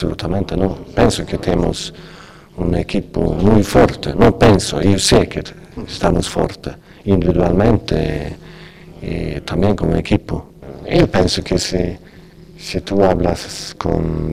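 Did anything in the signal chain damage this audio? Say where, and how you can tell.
Yes. Throughout the clip there is overlap-add ripple from a frame-based processing stage, such as call processing or a resynthesis step, whose windows were overlapped so their gains don't sum flat. The level dips by about 60 dB once per frame, around 200 times a second, giving a harsh, metallic buzz on all the sound. On the waveform the envelope is chopped into regular notches a few milliseconds apart. A spectrogram shows evenly spaced vertical striping across every frequency.

Hard clipping appears in eight spans: 0.32–1.69 s, 2.78–5.22 s, 6.04–6.46 s, 7.10–7.99 s, 9.60–10.16 s, 10.93–11.80 s, 12.92–13.32 s and 13.89–13.97 s. The signal was driven past full scale at a converter or sample-format conversion stage, by about 2 dB in the final span and up to about 15 dB between 2.78 and 5.22 s. The peaks are sliced flat, so the waveform shows squared-off tops in those spans. 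The flattening creates harmonics that show on a spectrogram as bright broadband energy reaching into the high kHz range, and it is heard as harsh fuzz and crackle on the loud sounds.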